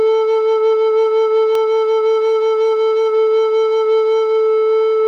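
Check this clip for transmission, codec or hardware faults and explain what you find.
One fault stands out in the music. At 1.55 s a single sharp snap sits on top of the sound, lasting only about a millisecond. It is an electrical switching spike, likely from a nearby switch, motor or static discharge arcing briefly and coupling into the audio line.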